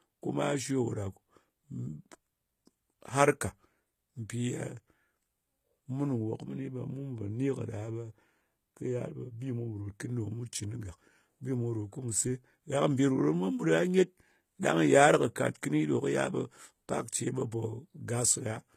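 From start to finish the speech carries plainly audible HE-AAC compression, likely at a low bitrate around 20 kbps. The treble above the coded band is rebuilt from copied lower bands, so s sounds come out gritty and lispy, and nothing survives above about 14.9 kHz.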